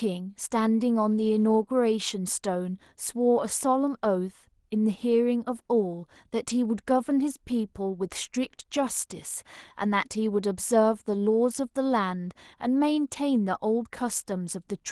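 No technical faults are audible.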